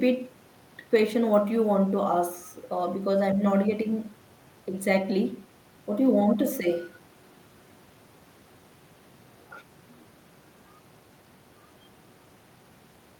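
Nothing technical stands out in this speech recording, with no faults to point to anywhere in it.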